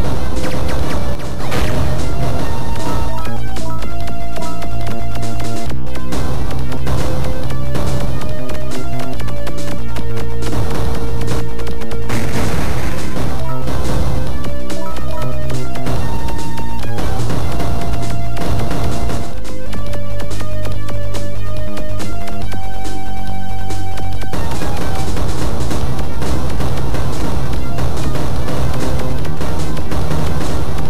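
From 1.15 to 1.40 s the sound suddenly drops by about 6 dB, then recovers, most likely one channel drops out briefly before the mono sum.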